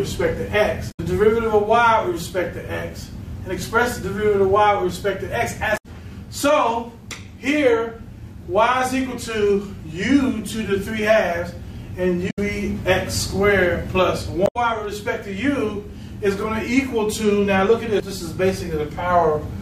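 Damaged data in the compressed stream appears at 0.88–1.00 s, 5.74–5.86 s, 12.27–12.39 s and 14.43–14.56 s. Each burst lasts about 0.12–0.13 s and sounds like a brief glitch, because the decoder misreads corrupted frames and hunts for the next valid header. A plain dropout would leave a clean silent gap instead.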